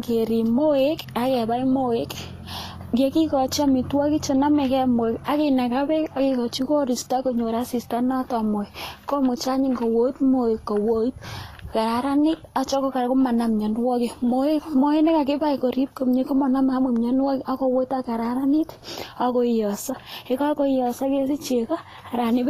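From start to finish the speech carries plainly audible codec damage, likely from Vorbis compression at a low setting. Nothing sounds above about 14.2 kHz. Below that, the treble is hissy and grainy. Fine high detail has been swapped for noise of similar energy. Tones sound roughened. Consonant onsets are smeared rather than crisp. The coarseness fits a bitrate in the low thirties of kbps.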